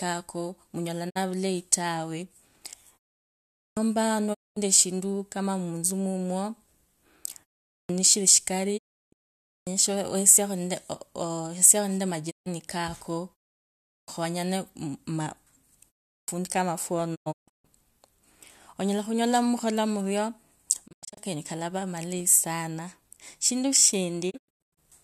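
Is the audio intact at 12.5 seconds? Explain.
No. The clip is just recovering from a digital broadcast dropout spanning 12.29 to 12.48 s. The receiver lost good frames and muted, fading to silence over about 20 ms. Roughly 144 ms of speech is gone, consistent with six lost frames, before sound resumes.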